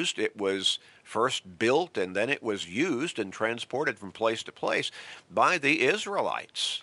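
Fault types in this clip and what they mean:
No technical faults are audible in this speech recording.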